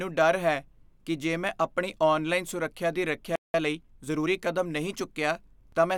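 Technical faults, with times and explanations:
3.36–3.54 s, playback stall: The player most likely ran short of buffered data or had its output thread blocked. The speech cuts off mid-flow and a gap of about 186 ms of silence follows before sound resumes.
3.54–4.28 s, time-compressed catch-up: To work off the backlog from the stall, the player trims small slices and cross-fades the joins, running about 1.25 times faster. The speech sounds hurried but keeps its normal pitch.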